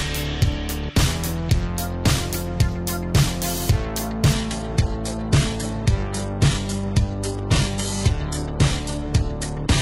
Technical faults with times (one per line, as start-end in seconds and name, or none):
4.34-9.81 adaptive stream at a lower bitrate